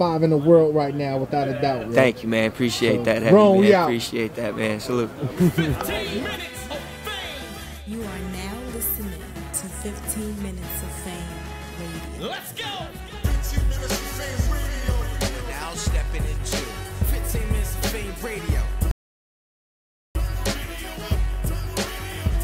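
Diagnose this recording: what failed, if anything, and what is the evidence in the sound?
The input path most likely lost its signal, a disconnected device or failed link, while recording carried on writing zeros: an audio dropout to silence. From 18.91 s to 20.15 s the sound cuts off abruptly to silence with no room tone, and about 1.24 s of material is lost.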